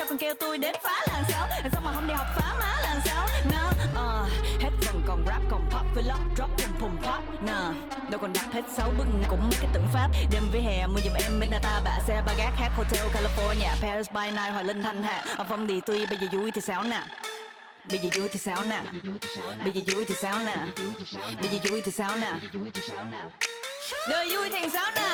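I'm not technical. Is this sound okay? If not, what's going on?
No. A skip ahead happens at about 9.25 s: roughly seven tenths of a second of sound is dropped, and playback jumps straight to what was already waiting, with no gap. The two sides of the missing piece are joined almost directly.

Jitter buffer speed-up follows twice, from 9.68 to 10.50 s and from 13.81 to 15.77 s. The receiver had built up too much waiting audio, so it repeatedly snipped out tiny slices, about a tenth of a second in total each time. The sound runs 9% and then 5% faster at unchanged pitch.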